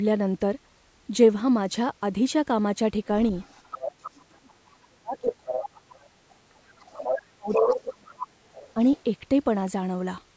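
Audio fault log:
3.17–9.01 s, other side's voice leaking through: far-end speech bleeds in at 3.17–3.91, 5.17–6.09, 7.01–7.15 and 7.51–9.01 s, rising from about -15 to about -5 dB, likely incomplete echo cancellation of the loudspeaker.
3.92–8.78 s, speech suppressed in double talk: the voice drops about 40 dB at 3.92–5.84 s, about 35 dB at 6.68–8.19 s, and about 5 dB at 8.74–8.78 s, likely while both sides overlap.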